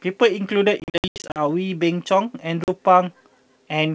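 From 0.80 to 1.41 s there's packet loss on the ADPCM call, about 340 ms of dropouts scattered over that stretch, with the longest silent gap 80 ms. Another short hole lands at 2.64 s. Each return sounds slightly distorted because the decoder's predictor has lost sync with the sender's.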